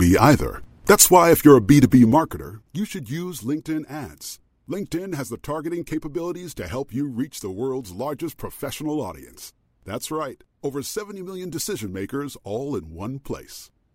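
Zipper noise runs from 1.85 to 2.82 s in this speech clip, where the level drops by roughly 15 dB in audible 1 dB steps, about fifteen per second. With no smoothing, each jump in gain puts a small discontinuity into the waveform, and the resulting clicks ride on the speech as a fine ticking or zipping for as long as the fade lasts. The gain was updated in coarse increments rather than ramped sample by sample.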